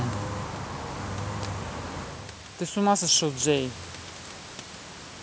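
From 2.73 to 3.83 s, automatic gain rising: after the talker moves away from the microphone around 2 s and the input drops by about 17 dB, the gain control lifts the level by about 5 dB. Unlike the talker simply moving, the room noise swells with the voice.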